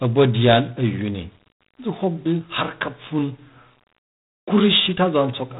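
Throughout, the speech passes through G.726 ADPCM, coding only small differences from a running prediction with too few bits per sample, which fits the 24 kbit/s rate. The result is a plainly audible harsh, rasping hiss that rises and falls with the speech, and nothing above 3.8 kHz.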